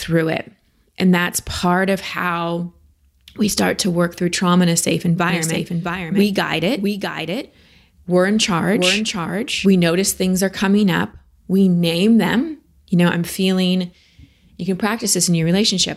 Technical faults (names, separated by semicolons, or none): doubled audio track